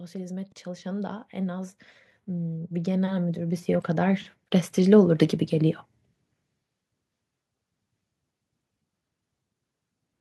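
Speech, with automatic gain rising from 0.11 s to 5.8 s. The level climbs by about 19 dB across those seconds. Voice and background noise swell together. That points to an AGC judging the input too quiet and steadily raising its gain.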